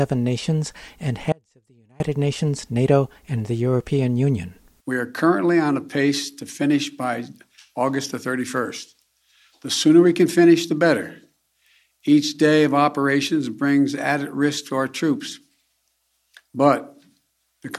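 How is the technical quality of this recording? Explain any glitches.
The recording has one glitch: an audio dropout to a faint residue from 1.32 to 2.0 s. The signal cuts abruptly for about 0.68 s, leaving only a faint leak roughly 35 dB down. This likely comes from a momentary break upstream while the downstream path stayed live.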